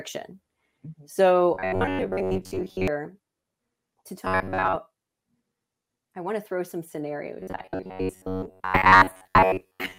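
Robotic sound from repeated short buffers occurs at 1.54–2.88 s, 4.25–4.76 s, and from 7.40 s, after "want to throw some", to the end. The speech turns into a rigid metallic buzz at 93.8 Hz, likely from a 10.7 ms chunk replayed in place of most of the audio.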